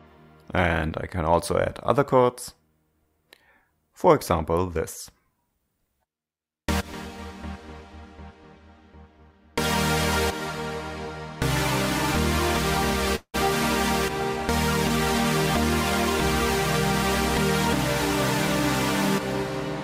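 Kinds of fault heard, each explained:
call audio freeze: the sound trails into a fading fill and brief silence, then resumes 184 ms late with nothing lost, unlike a dropout; likely a jitter buffer underrun.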